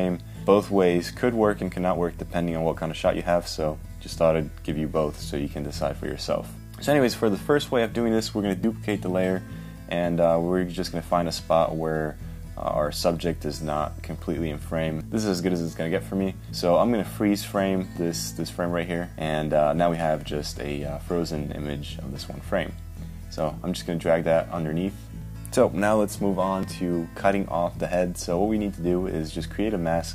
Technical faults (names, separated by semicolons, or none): dropped buffer (overrun)